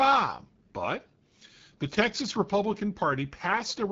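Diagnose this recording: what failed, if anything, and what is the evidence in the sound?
The fault is at the codec stage: AMR wideband (HD Voice) coding runs through the whole clip, and the damage is plainly audible. The speech has a rough, raspy texture, the sign of a pulse-excited vocal tract model working with too few bits, which points to one of the lowest rates, around 8.85 kbit/s. Nothing is present above about 7.4 kHz. That wideband ceiling rules out narrowband AMR, which would stop near 3.4 kHz, and the raspiness rules out a simple low-pass filter.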